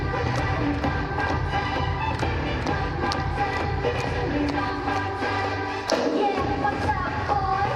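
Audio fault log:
No fault is heard in this audio.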